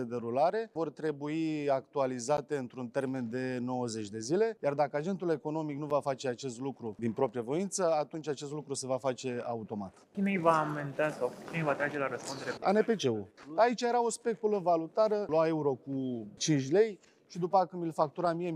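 A block of digital silence hits at 2.37 s and again at 5.90 s, gaps of about 11.6 ms and 6.6 ms. The audio drops straight to zero and returns with no fade; both gaps are short enough to be heard as a tick or dip rather than silence. The first gap fits a 512-sample buffer left unfilled in time.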